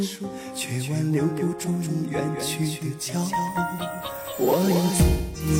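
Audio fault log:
throughout, doubled audio track: A second copy of the signal, likely from a slower capture path or an out-of-step edit, is mixed in about 200 ms behind the original and about 5 dB quieter. This gives a flat, full-band slapback with no decay or room colour.
5.09–5.49 s, AAC frame loss with concealment: About 256 ms of coded audio, which fits six lost AAC frames, never reached the decoder. It filled the gap by reusing and reshaping the last good spectrum.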